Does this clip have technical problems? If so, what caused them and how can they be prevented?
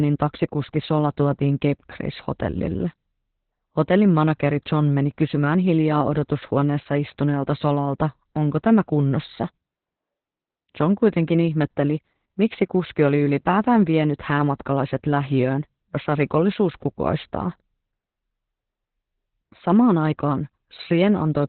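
Yes: heavy Opus voice compression throughout, which sounds like a SILK-only narrowband encode near 8 kbps, cuts everything above 4.2 kHz and coarsely codes the excitation, leaving the speech muffled, hoarse and slightly robotic. To prevent it, encode at a higher bitrate so Opus keeps wideband or fullband audio.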